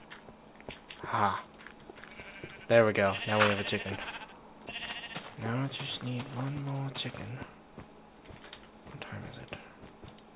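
Nothing is technically wrong with this clip; there is no fault to point to anywhere in the audio.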